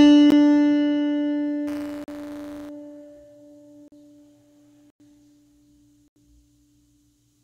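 At 0.31 s the output buffer was likely not filled in time and a block of digital silence about 15 ms long was written. The music drops to zero and back with no fade, so it is heard as a sharp tick.

From 1.67 s to 2.69 s the program writing the ring buffer and the hardware reading it have slipped and cross inside every period. This is buffer tearing: a small slice of each buffer replays audio from roughly 10 ms earlier, joined hard on both sides. The result is a rattling, robotic buzz at 188 Hz, which fits a 256-sample buffer, and it sits on the music throughout that stretch.

Inside it, from 2.04 s to 2.08 s, another block of digital silence cuts a 40 ms hole. Further blocks follow: 40 ms at 3.88 s to 3.92 s, 98 ms at 4.90 s to 5.00 s, and 80 ms at 6.08 s to 6.16 s. Each is an abrupt gap with no fade, and the longer ones sound like the music briefly dropping out.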